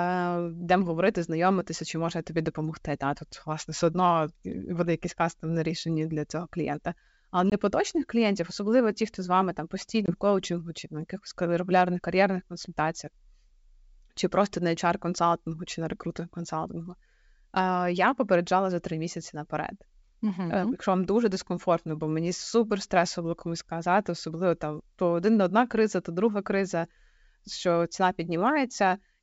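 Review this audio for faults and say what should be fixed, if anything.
Two short, hard-edged dropouts break the speech, each followed by brief roughness before the speech settles: at 7.50 to 7.55 s, just before "клієнтів особливо ті хто", and at 10.06 to 10.14 s, between "хто з вами там" and "коучингу чи на якихось". This is packet loss on an ADPCM call. Each gap is about 20 ms of missing audio, roughly one packet, filled with silence. The receiver's adaptive predictor and step size then no longer match the sender's, so the returning sound is briefly distorted until the decoder resynchronises. The G.722 wideband coding at 64 kbit/s carries the surrounding audio cleanly. To prevent this, add jitter buffering with packet loss concealment, or forward error correction, so that lost frames are filled in and the decoder state stays aligned.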